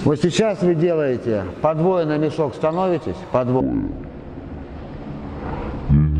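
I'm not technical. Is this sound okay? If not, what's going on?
No. A section at the wrong speed runs from 3.61 s to the end. From there the sound plays at about 0.55 times its real speed, so it drags and drops nearly an octave in pitch. The likely cause is playback on the wrong clock.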